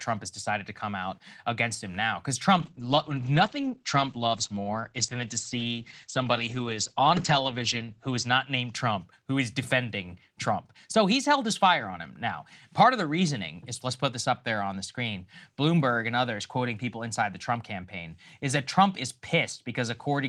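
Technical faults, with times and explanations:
2.59–9.05 s, call bitrate drop: the speech turns muffled and rough, losing everything above 8 kHz for about 5.4 s before clearing just before "who is defending". The encoder was starved of bits, which fits a fall from about 32 to 13 kbps.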